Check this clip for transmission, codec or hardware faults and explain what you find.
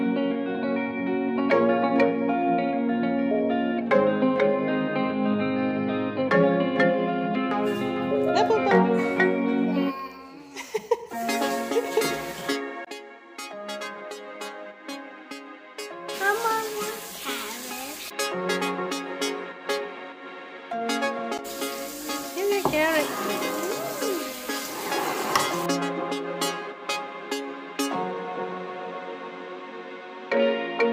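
Brief hard clipping occurs twice, at 3.94 to 3.97 s and 8.73 to 8.77 s. At these moments the peaks exceeded what a stage in the chain could pass, by about 1 dB in the first event and about 2 dB in the second, so their tops were sliced flat. Each event is heard as a short crackle on the loud peak. On a waveform the affected peaks show flattened plateaus. A spectrogram shows thin vertical streaks of added high harmonics at those two instants.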